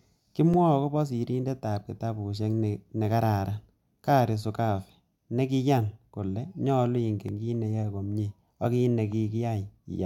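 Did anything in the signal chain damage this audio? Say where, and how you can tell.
Yes, at the driver or buffer stage: blocks of digital silence at 0.54 s (2.9 ms) and 7.29 s (0.73 ms) tick abruptly where output buffers went unfilled.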